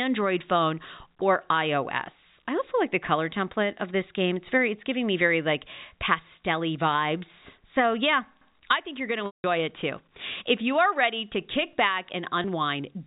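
At 9.26 s the speech drops out for 180 ms, which points to a run of lost packets of about 20 ms each. This is packet loss with pitch repetition: the receiver loops the last pitch period to fill the gap, then fades it to silence before the speech cross-fades back in at 9.44 s. A second, single 20 ms loss at 12.42 s is short enough to come through only as a brief held, buzzy tone, heard within the 4 kHz telephone band of the G.711 coding.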